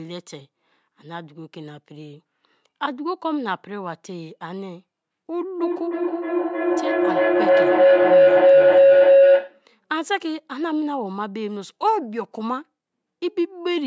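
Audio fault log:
5.41–9.68 s feedback howl: a pulsing tone around 500 Hz swells to about 12 dB above speech, repeating about every third of a second as the microphone-to-loudspeaker loop gains level each pass.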